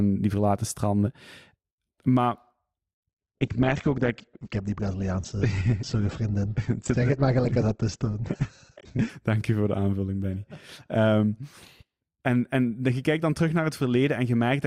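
A speech clip with an adaptive stream at a lower bitrate from 3.09 to 9.09 s. Everything above 8.1 kHz vanishes and codec artefacts thicken, which fits Opus stepping down from roughly 64 to 12 kbit/s. Unlike a dropout, both switches are sudden but leave no gap.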